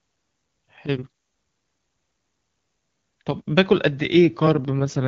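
Up to 4.66 s the AMR wideband HD Voice coding sounds clean, then an AMR rate drop runs to the end: the network evidently told the codec to cut its rate and spend bits on error protection. There's no gap and no band loss, but the speech turns rougher and more synthetic, which fits a step down from 23.85 to 8.85 kbit/s.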